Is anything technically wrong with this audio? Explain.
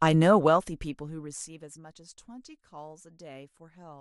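Yes. From 0.33 to 1.83 s a fine ticking, zipping texture rides on the speech as the level falls by roughly 20 dB. This is zipper noise: the gain drops in about 200 small unsmoothed steps a second, each leaving a tiny click.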